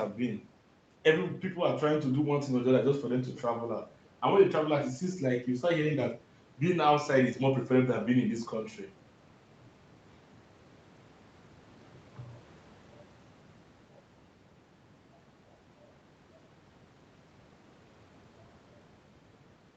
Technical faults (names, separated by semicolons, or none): none